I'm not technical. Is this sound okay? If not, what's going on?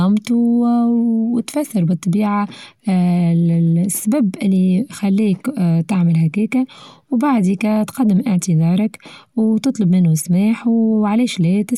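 Yes, no technical faults are audible anywhere in this speech recording.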